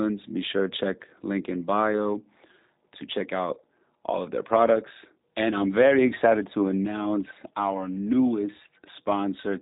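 Throughout the speech the G.729 codec is plainly audible, with a rough, buzzy, faintly synthetic texture that fits an 8 kbit/s G.729A stream modelling each frame from a filter and sparse pulses. A spectrogram shows nothing above 4 kHz, with smeared, blocky harmonics.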